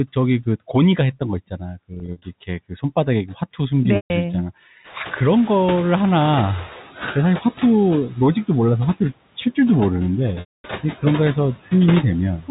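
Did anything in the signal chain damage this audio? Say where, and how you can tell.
Yes, there are faults at two stages: call processing (the noise suppressor) and the network.

Noise suppressor artifacts run through the whole clip. The suppressor pulls the steady background down by about 13 dB, frame by frame, so the noise sinks in the gaps and pops back up under the speech. That's the band-by-band gain constantly flipping, sitting on top of the 4 kHz-limited G.711 telephone band.

Packet loss with pitch repetition happens three times, so this one's on the network. Between 1.94 and 2.22 s, 140 ms goes missing in short bursts scattered over 280 ms, the longest only 40 ms. Those bits come across as brief buzzy, held-over sounds. At 3.96 to 4.10 s there's another 140 ms gap, and at 10.40 to 10.64 s a 240 ms one. In those longer gaps the repeated pitch period fades out and drops to silence, and then the speech cross-fades back in. 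The gaps fit 20 ms packets.

The noise suppressor catching up shows from 4.84 to 6.82 s. The room noise jumps by about 19 dB around 5 s, and the suppressor's noise estimate needs roughly 2 s to follow it. During that stretch the louder noise comes through with only about 8 dB of reduction, and you can hear it gradually sink as the estimate adapts.

Speech cut by the noise suppressor happens right at the end, from 12.40 to 12.49 s. The suppressor mistakes some of the speech for noise and pulls it down by as much as about 12 dB for around a tenth of a second. That last bit sounds swallowed and faint.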